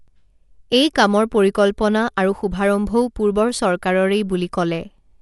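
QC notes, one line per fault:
throughout: likely Dolby Digital compression; speech dull, nothing above 11.5 kHz, with rough fluttering noise filling starved bands, unlike plain low-pass, which fits 64 kbps.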